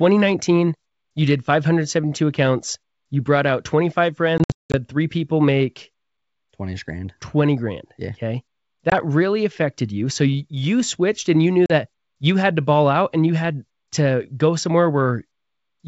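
Speech carried over G.722 wideband coding shows packet loss on an ADPCM call. Hard-edged silent holes sit at 4.38–4.76 s before "three people make" (about 280 ms lost in bursts, longest 180 ms), at 8.90 s before "really affected you", and at 11.66–11.72 s between "switched and you knew" and "you had to ball". On a spectrogram these appear as blank vertical gaps, and the waveform drops abruptly to silence. Each return brings slightly distorted speech while the decoder's predictor and step size resynchronise.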